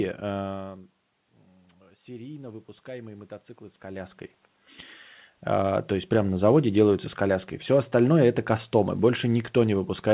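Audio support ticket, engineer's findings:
Automatic gain rising, 1.88 to 4.24 s. Level swells by about 4 dB over roughly 2.4 s, room noise lifting with the speech. AGC reacting to input that fell by about 15 dB, likely from the talker moving back, and ramping gain upward. The rise is slow, so the dip is only partly recovered. Band already capped at 4 kHz, consistent with a G.711 call path.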